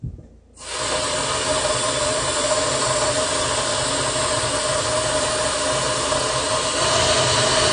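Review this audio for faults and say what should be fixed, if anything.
Throughout, nothing is heard above 9.8 kHz and the sound is dull and warbly, likely from AAC compression at about 32 kbps; a plain low-pass would sound clean. Encode at a higher bitrate or keep a lossless master.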